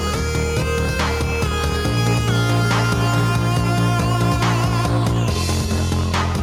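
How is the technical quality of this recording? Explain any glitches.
The technical quality of the recording holds up, with no glitches to explain.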